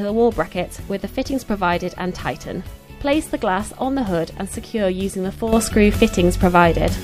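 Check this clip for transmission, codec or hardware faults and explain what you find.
One fault is present, a sudden gain jump near the end of the clip. At 5.53 s the digital gain most likely changed between one sample and the next, as happens when a level setting or bit shift takes effect with no ramp. From that point to the end, the sound steps up by about 10 dB at once, and the background noise rises with it by the same amount, so the whole signal sits noticeably louder for the last stretch.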